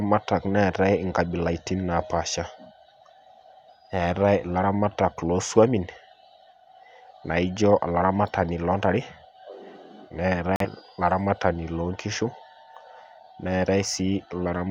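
At 10.56 to 10.66 s the speech cuts to silence in a digital broadcast dropout, consistent with one corrupted frame muted by the receiver; roughly 43 ms of programme is lost.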